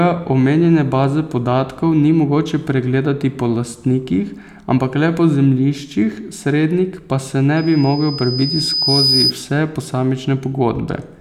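Speech with a loudspeaker feedback squeal from 7.57 to 9.33 s. A single tone at 5 kHz appears and swells over roughly a second and a half until it sits about 5 dB above the speech. A microphone is hearing the loudspeaker it feeds, and at that frequency the loop gain exceeds one. What separates it from a steady interfering whistle is that growth from nothing to a plateau, set by the loop rather than an outside source.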